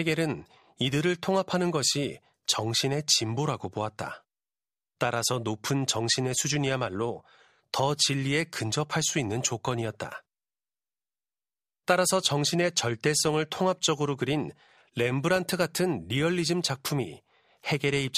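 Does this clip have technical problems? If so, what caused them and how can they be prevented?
No, no technical faults here.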